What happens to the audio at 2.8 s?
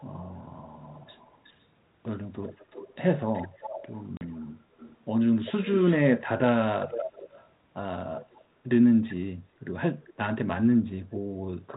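An echo leak, likely from a far-end echo canceller that failed to remove what its microphone picked up from the loudspeaker, runs from 2.42 to 2.95 s. A faint copy of the speech, about 20 dB down, returns roughly 372 ms late.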